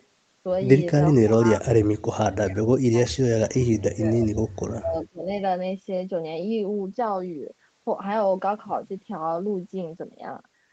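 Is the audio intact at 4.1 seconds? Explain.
No, 4.1 seconds falls inside a dip that runs from about 3.68 to 4.53 s. The speech drops sharply, by roughly 30 dB at its deepest. This is likely speech suppressed in double talk: with both sides talking at once, the echo canceller couldn't tell the near talker from the loudspeaker echo and turned everything down together, pulling the near voice under for that stretch.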